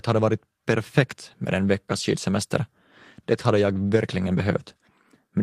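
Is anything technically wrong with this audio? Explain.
Yes. From 3.79 to 3.81 s, a lost packet rebuilt from error correction: the decoder played a low-bitrate copy carried by the next packet, giving a rougher, noisier 20 ms without any gap. A spectrogram shows a brief grainy, smeared patch, and the waveform stays continuous.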